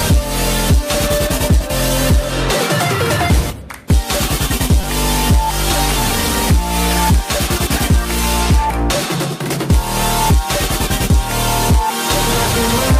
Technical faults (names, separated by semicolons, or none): repeated buffer